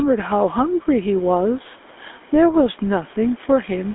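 From start to finish the waveform sits displaced from zero by a constant amount, a DC offset. It cannot be heard as a tone, but it shows as a steady component at the very bottom of the spectrum and eats into headroom on one side of the waveform, so peaks on that side clip earlier than they should. This speech passed through call microphone processing, whose high-pass filter is what normally removes such a constant.

Also throughout, the gain swings by roughly 5 dB. That is gain pumping, likely from input gain set well above what the microphone needs, with a fast limiter or compressor clamping down whenever the signal gets loud. The room noise sits around 40 dB below the speech. Loud and quiet passages end up compressed toward the same level, giving a flattened, squeezed character.

The whole clip also carries plainly audible GSM full-rate codec damage, consistent with a 13 kbps stream. 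The codec rebuilds the speech from a vocal-tract model excited by regularly spaced pulses, keeping only part of the excitation detail, and that coarse excitation produces a buzzy, gravelly roughness over the speech. The band is confined to roughly 250 Hz to 3.5 kHz, with nothing above 3.8 kHz, so sibilants lose their edge and the speech sounds narrow and telephone-like.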